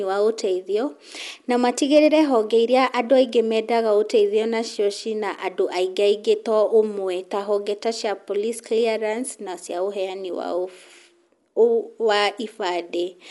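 From start to finish, the speech is band-limited and coarse. Nothing is present above 11.4 kHz, so it sounds dull and closed-in. A rough, fluttering noise clings to the voiced tones. The damage is plainly audible. This is likely Dolby Digital compression at a low rate, which fits around 64 kbps. Short of bits, the encoder cuts the top band and leaves many frequency lines without mantissa data. The decoder fills those gaps with noise.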